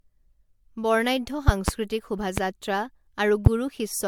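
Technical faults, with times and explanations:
Throughout, generation loss: the speech has a swirly, hollow, smeared quality with blurred consonant attacks, more than its bitrate alone would cause, likely from about five successive MP3 passes near 100 kbit/s. A spectrogram shows patchy holes and smearing, with nothing above 19.9 kHz.
1.48 to 1.71 s, 2.38 s and 3.46 s, loud pop: sharp pops on top of the continuing speech, a quick pair in the first event and single pops at the others, each about 20 dB above the signal, likely from an electrical step or driver glitch. The waveform shows tall narrow spikes, and the spectrogram shows thin vertical broadband lines.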